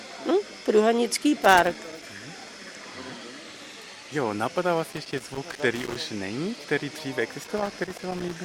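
Loose connector crackle breaks in three times: from 1.44 to 2.10 s, from 4.91 to 5.96 s, and from 7.44 to 8.36 s. A worn or dirty contact is making and breaking as it shifts, chopping the signal, so each burst sounds like irregular scratching. On a waveform the signal shows ragged dropouts and spikes. A spectrogram shows scattered broadband vertical streaks across those spans.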